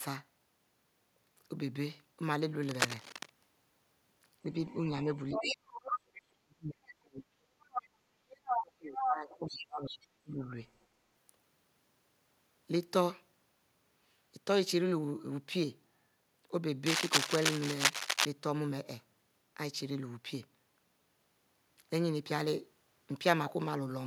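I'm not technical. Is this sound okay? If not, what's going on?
No, there are three kinds of problem in this speech recording.

Cable scratch noise: from 2.63 to 3.30 s and again from 16.83 to 18.25 s, a scratchy, rustling burst sits over the voice. The second one is about as loud as the speech. It's likely a worn cable or plug being jostled.

Other side's voice leaking through: a second voice sneaks in. There's a faint scrap at 4.71 s, then stretches from 5.15 to 6.22 s and 7.74 to 7.88 s at nearly the talker's loudness, and from 8.31 to 9.96 s it's as loud as the talker. The far end's audio is likely playing on a speaker and getting back into the microphone.

Speech suppressed in double talk: while the other side's audio is playing on the speaker, the main voice drops sharply, from 4.9 to 5.71 s, 6.33 to 7.76 s and 8.49 to 10.58 s, nearly vanishing at its worst. The system likely can't separate the two voices at once, so it turns both down.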